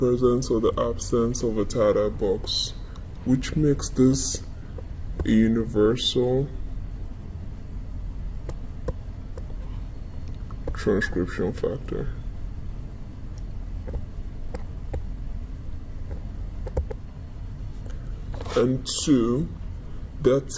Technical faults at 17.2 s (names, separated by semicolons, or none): wrong sample rate